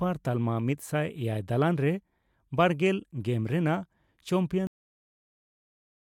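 The final stretch of audio was never written out, a cut-off end at 4.67 s. The speech stops abruptly mid-sound at that point and falls straight to digital silence for the remaining second and a half, with no natural decay.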